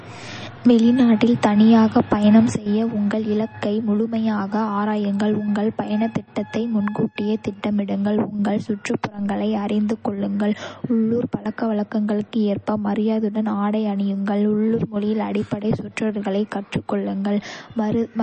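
Throughout the recording the speech sounds watery and swirly, with nothing above 8.3 kHz and plainly audible smearing on s sounds and onsets. This is likely MP3 compression at a bitrate around 32 kbps, which cuts the treble and drops weak spectral detail frame by frame.

From 2.50 s, right after "வெளிநாட்டில் தனியாகப் பயணம்", to the end, the level falls abruptly by about 6 dB. This is likely one channel dropping out, leaving the mono sum with half its shared signal.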